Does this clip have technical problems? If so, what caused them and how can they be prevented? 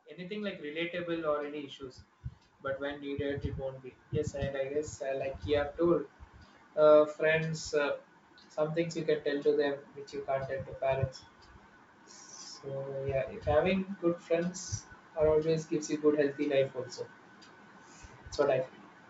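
Yes. Automatic gain rising runs from 0.05 s to 5.43 s. The level control judged the incoming speech too quiet and kept raising its gain, by about 16 dB in total. Voice and background noise swell together over those five seconds rather than settling at once. The band limit at 8 kHz comes from the wideband call codec, which fits G.722, and is not part of this fault. To prevent it, set a sensible input level before the call and keep the microphone gain fixed, or give the gain control a faster start.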